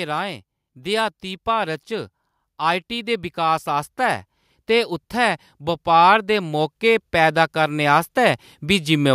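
From 0.73 s to 9.1 s the level climbs steadily as automatic gain rising takes hold: the gain control has judged the input too quiet and keeps turning itself up, adding about 13 dB over roughly eight seconds. What separates it from a talker simply moving closer to the microphone is that the room noise swells right along with the speech, so the background grows as much as the voice rather than staying put beneath it.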